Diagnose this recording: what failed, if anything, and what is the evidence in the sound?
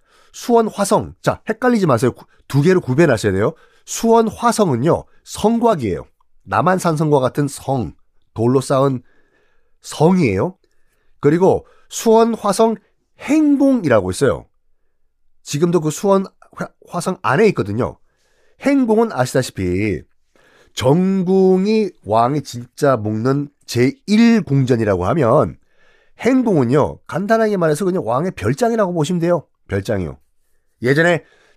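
Nothing failed here: no stage in the chain, from the wiring to the playback, leaves any mark that a careful listen can pick out.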